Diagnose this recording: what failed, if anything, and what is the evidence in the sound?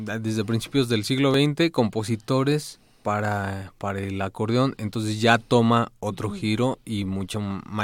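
Overlap between stream segments, a streaming fault. Tiny skips at 1.34 s, after "desde principios del siglo", and 7.34 s, after "ya toma otro giro". The 6 s spacing fits segment boundaries. About 5 ms is trimmed at each.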